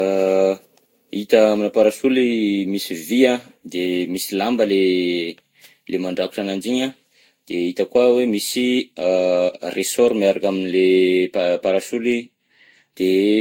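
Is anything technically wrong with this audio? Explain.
Yes. Generation loss runs through the whole speech clip: it sounds swirly, smeared and hollow, consonant attacks are blurred, and nothing reaches above 16.6 kHz. The likely cause is about five successive lossy encodes, consistent with Vorbis near 60 kbit/s, each requantising on a shifted frame grid.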